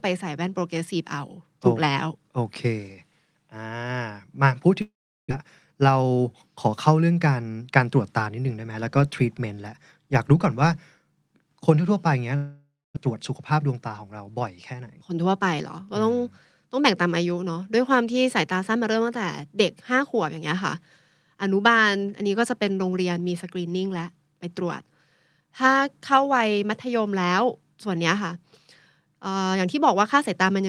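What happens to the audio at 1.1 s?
At 1.1 s the speech carries on cleanly, with no dropout, click, distortion or other audible fault.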